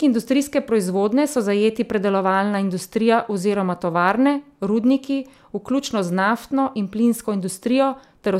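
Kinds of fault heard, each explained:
No kinds of fault are heard in this speech clip.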